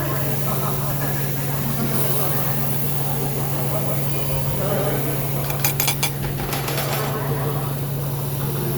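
Everyday sound with a doubled audio track throughout: an equal-level, full-band copy trails by roughly 150 ms, likely from a second, slower capture path.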